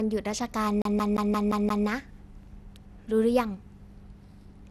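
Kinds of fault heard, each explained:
generation loss: Swirly, hollow, smeared speech with blurred attacks and nothing above 15.9 kHz, likely from about seven re-encodings through a 96 kbit/s MP2-type codec.
CD stuck on one turn: From 0.82 to 1.87 s, a 174 ms slice repeats six times with brief mutes, the even stutter of a scratched disc throwing the laser back.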